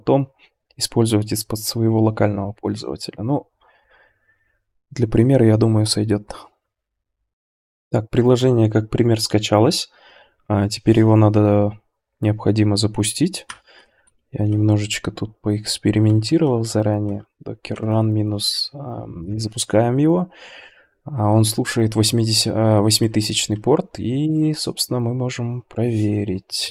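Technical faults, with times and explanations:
Throughout, resampler restarted on every block. The rate conversion, which points to 44.1 kHz to 48 kHz, ran on each 20 ms block separately. Each block edge lacked its true neighbouring samples. The small edge errors form a 50 Hz buzz, present only with sound.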